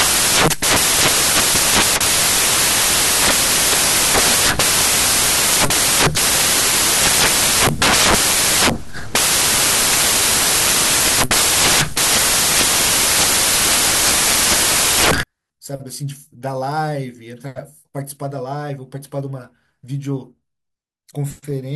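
Samples built from the wrong bytes run from the start to about 15.23 s. The reader assembles each speech sample from mismatched bytes, whether offset by one, swapped in order or misaligned, so the rapidly varying low-order bits land in the most significant position. The result is loud, harsh broadband noise across that whole stretch, close to white on the louder speech.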